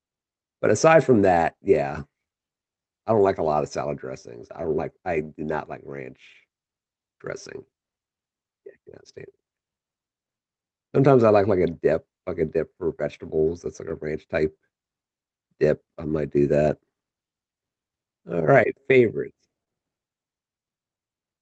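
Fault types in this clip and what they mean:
Clock drift between sender and receiver: The sending clock runs roughly 2% slower than the receiving one. The jitter buffer keeps draining, so the receiver has to stretch the speech to keep up. This shows as small timing hiccups throughout the clip.
Repeated timing corrections: From 0.89 s to 21.35 s the receiver keeps stretching short pieces, all in the same direction. Playback runs at 99% speed, adding roughly 0.3 s overall. If heard at all, it comes across as slight hiccups or a slightly unsteady pace.
Scattered short gaps: About four small holes fall between 4.22 s and 6.37 s, and about seven between 10.38 s and 13.93 s. Each is patched by continuing the previous sound, none longer than roughly 15 ms. Nothing is lost, but brief ticks or smears appear.
Short stall from a late packet: At 19.64 s a packet arrives late and the buffer briefly runs dry. 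The receiver holds the last sound for 26 ms, then resumes where it left off. Nothing is missing, but that moment drags slightly, with a faint buzz or dip.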